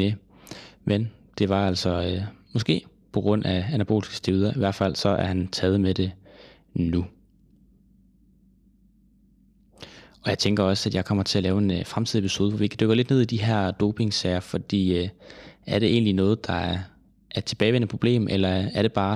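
No technical faults are audible.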